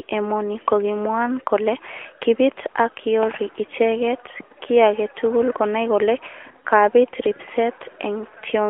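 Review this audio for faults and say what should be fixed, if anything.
Nothing stood out on listening to this speech recording, so there is nothing here that needs fixing.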